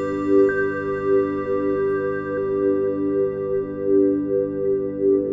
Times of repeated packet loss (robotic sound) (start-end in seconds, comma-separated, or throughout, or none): none